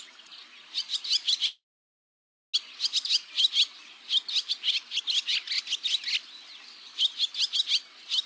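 Call audio that stalls with a call audio freeze from 1.46 to 2.56 s. The last sound stretches into a brief fading buzz, then about 0.94 s of near-silence, and the audio picks up where it left off with nothing lost, so everything after lands about 1.08 s late. That points to late packets likely draining the jitter buffer. Nothing comes through above 8 kHz, which fits a G.722 call codec.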